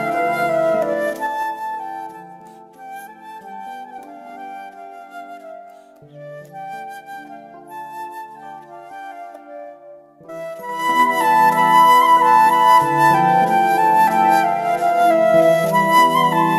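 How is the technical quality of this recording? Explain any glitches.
The recording has two stretches of zipper noise, heard as ticking while the level moves. From 0.85 to 1.75 s the level drops by about 15 dB in 3 dB jumps, around seven a second. From 10.54 to 11.09 s it rises by about 15 dB the same way, around ten a second. Each unsmoothed jump leaves a small click. The waveform envelope looks like a staircase, and the spectrogram shows faint vertical lines at each step.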